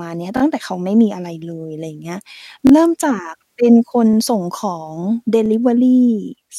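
Speech with a repeated buffer fault: new audio reached the device late four times, so it replayed its last block of about 23 ms, which fits a 1024-sample buffer. Each repeat is a hard-joined stutter, heard three times at 0.37 s and 2.67 s and twice at 4.13 s and 5.46 s.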